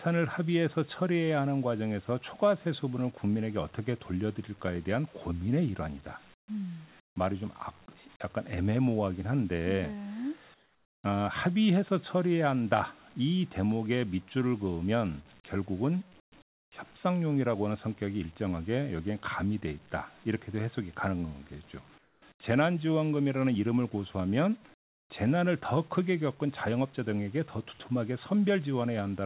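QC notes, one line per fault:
6.34–6.48, 7.00–7.16, 10.54–11.04, 16.20–16.32, 16.42–16.72, 21.98–22.22, 22.32–22.40 and 24.74–25.10 s: comfort noise in place of the background. In each pause, the real room sound, sitting about 30 dB below the loud parts, gives way to a flat, featureless hiss. That hiss drops by about 11 to 26 dB. The gaps last 80 to 500 ms. The likely cause is discontinuous transmission: the sender went quiet and the receiver filled in synthetic noise.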